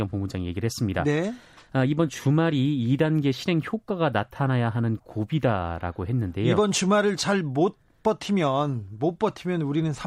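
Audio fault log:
No fault was found in the clip.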